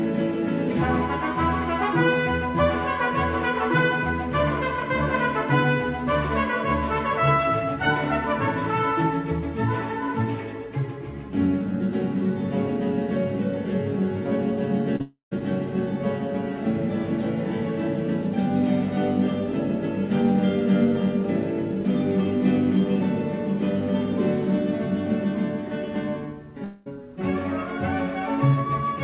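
Short concealed packet loss, 14.96 to 15.01 s: about 40 ms of the stream arrived too late for the decoder. The receiver covered roughly 33 ms of that by extending the preceding sound and then blending back. The result is a brief smear or wobble rather than a clean break.

Long network dropout, 15.01 to 15.33 s: this follows straight on from the short loss. About 300 ms of audio is missing, likely because the network stopped delivering packets for that stretch. The concealment carries the last sound forward as a fading buzz or hiss, and roughly 140 ms of near-silence is left before the audio resumes further along. A second dropout at 26.64 to 26.88 s removes about 220 ms, again likely from a network stall. Here the fading fill covers the whole gap without reaching silence, so it sounds like a smeared, decaying tail jumping to later material. Throughout, nothing above 4 kHz is present, which fits a G.711 A-law call codec.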